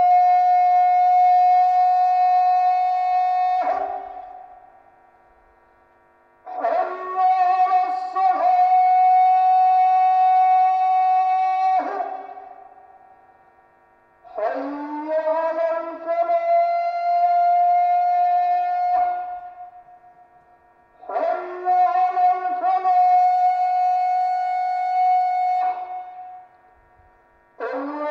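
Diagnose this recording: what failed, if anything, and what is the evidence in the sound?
Nothing in the recording points to a failure at any stage; the sounds it carries come through continuous and intact throughout.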